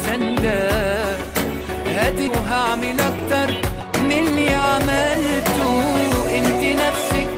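From 2.27 to 2.29 s there is a skip ahead: about a second of audio was dropped and playback jumps forward with no fill, the two sides joined almost directly. From 3.61 to 4.40 s a jitter buffer speed-up trims pitch-period-sized pieces, roughly 150 ms in total, so the audio runs at 119% speed with unchanged pitch and sounds hurried.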